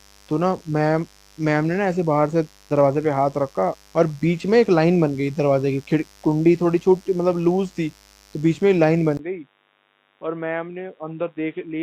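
A steady, raspy mains buzz at 50 Hz runs under the speech for the whole clip, sitting some 35 dB below it. Sharp switching spikes from a dimmer, rectifier or poor shielding, repeating twice per cycle, add harmonics that reach well into the kilohertz range.

From 3.69 to 3.75 s there is a short disruption caused by damaged data in a compressed stream. The decoder misreads the corrupted frames, loses sync and hunts for the next valid frame header, so the audio briefly breaks up.

At 9.17 s a 20 ms gap is followed by a sudden change to a dull, boxy sound that lasts to the end. Nothing above 3.8 kHz remains, the level falls roughly 10 dB, and a new noise floor appears around 50 dB down. The likely cause is the input switching to a poorer device, such as a headset's call profile.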